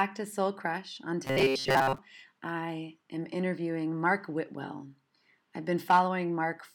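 From 1.25 s to 1.98 s, just before "I am interviewing", the speech takes on robotic sound from repeated short buffers: a rigid, metallic buzz fixed at 134 Hz that still roughly tracks the words. New audio was likely arriving too seldom, so a slice of about 7.5 ms kept repeating, covering most of the stretch. On a spectrogram this shows as evenly spaced harmonics at 134 Hz multiples, and the waveform roughly repeats cycle after cycle.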